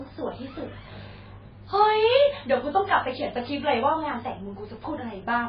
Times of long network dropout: none

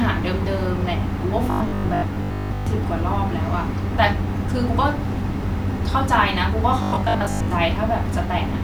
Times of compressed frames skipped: none

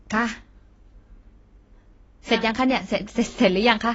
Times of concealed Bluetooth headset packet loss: none

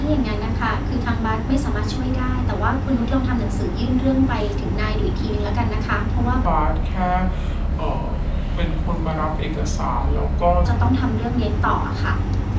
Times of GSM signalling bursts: none

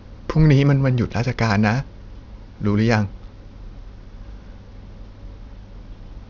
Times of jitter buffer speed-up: none

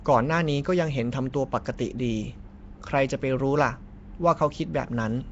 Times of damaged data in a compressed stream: none

